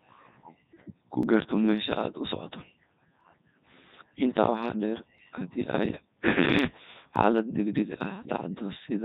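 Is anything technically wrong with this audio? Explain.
Yes, there are two faults.

Throughout the clip, the speech passes through the Codec 2 vocoder, and the damage is heavy. Codec 2 keeps no waveform. It sends only pitch, voicing, energy and a rough spectral outline, then rebuilds the voice from sine waves at the decoder. The result is a robotic, buzzy tone that fits its 3.2 kbit/s mode. Unlike ordinary low-bitrate codec smearing or warbling, the voice itself sounds synthetic.

At 1.23 s there is a single skip, most likely audio missing between chunks. Roughly a few tens of milliseconds vanish, and the two sides are butted together with no silence between them. This is likely where the recording chain closed one 2-second block and opened the next. It sounds like a brief jump forward in the speech. A dropout would leave a silent hole instead, and a dropout does not shorten the clip.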